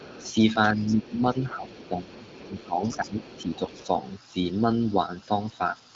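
Other side's voice leaking through at 0.0 to 0.33 s: a second voice sits faintly under the talker, about 20 dB down. The likely cause is the talker's device playing the far end on its loudspeaker while the echo canceller fails to strip that sound back out of the microphone signal. The same leak returns at 0.87 to 1.14 s, again about 20 dB below the speech, and then for a longer stretch from 1.45 to 4.13 s, slightly weaker at about 25 dB down.

Speech suppressed in double talk from 0.16 to 3.82 s: while that far voice is present, the talker's own level keeps sagging, falling by up to roughly 15 dB. Across about two seconds of this span it is pulled down in pieces, so the voice sounds ducked and uneven rather than steady. This is likely the echo canceller hearing both sides at once, failing to tell its own talker from the echo, and turning everything down together. All of this comes through a wideband HD Voice path with light AMR-WB coding at 15.85 kbit/s, one of its higher bitrates, with nothing above 7.6 kHz.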